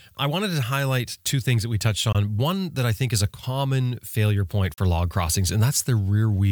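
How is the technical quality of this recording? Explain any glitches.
The recording has two brief Bluetooth dropouts in speech, at 2.12 to 2.15 s after "things that we touched" and at 4.74 to 4.78 s between "a common failure point" and "log crossings". Audio packets likely arrived too late for the headphones and were discarded, so playback cuts to silence with abrupt or briefly faded edges. The speech then resumes further along, as if it had kept playing, skipping about 19 ms and 37 ms, which fits one and two lost packets.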